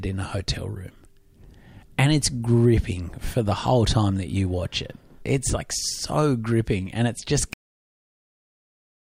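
At 7.53 s the final buffers of the recording were never written or played, leaving a cut-off end. The speech stops mid-sound without any natural decay, and the remaining 1.5 s is flat digital silence rather than room tone.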